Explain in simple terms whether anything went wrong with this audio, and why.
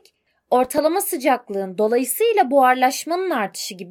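Between 0.64 and 0.78 s there's processor overload crackle. The computer fell behind and missed about five tiny chunks, each a few milliseconds long, leaving brief silent gaps that crackle.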